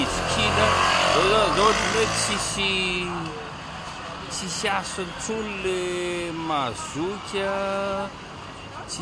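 No technical fault can be heard anywhere in the audio. Nothing in it calls for a time or a cause to be given.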